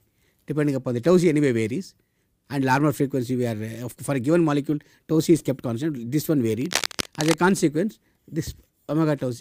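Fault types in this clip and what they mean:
Cable scratch noise: From 6.53 s to 7.37 s, a dense, irregular crackling and rustling sits over the sound, only a few decibels below it, for just under a second. The bursts are uneven in spacing and intensity. This is likely a worn cable, connector or control being moved, with its contact resistance fluctuating rapidly and modulating the signal path, which produces this scratchy, broadband disturbance.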